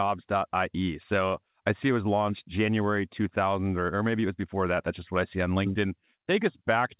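No faults are audible in the speech, which comes over a WebRTC call path using G.711 mu-law at 64 kbps, with nothing above 4 kHz, as that codec's band limit would give.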